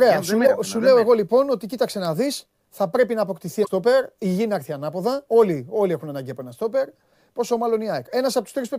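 At 0.43 to 0.49 s, just before "σου λέω εγώ λοιπόν", and again at 3.62 to 3.68 s, right after "θα πρέπει να αποκτηθεί", the speech is broken by a brief glitch lasting about 56 ms each time. Both are damaged data in a compressed stream. Corrupt bytes reached the decoder, which misread those frames, lost synchronisation and had to find the next valid frame header before normal playback resumed.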